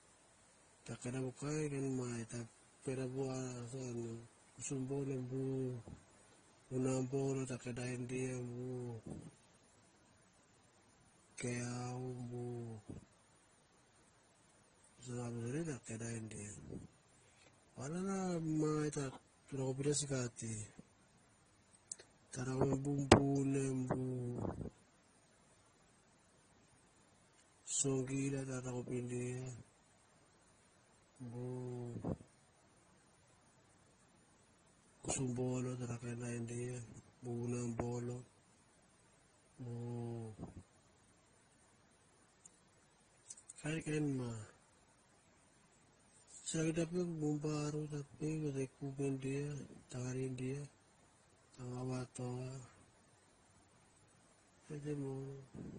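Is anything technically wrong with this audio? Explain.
Yes. Throughout the speech there are stacked, mismatched compression artefacts and nothing above 9.7 kHz. This is likely transcoding between lossy codecs: each re-encode keeps earlier damage, adds its own, and retains the lowest cut-off.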